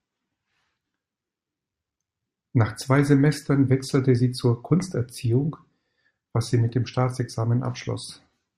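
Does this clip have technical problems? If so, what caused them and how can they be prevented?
No, this clip has no technical problems, so there is nothing to prevent.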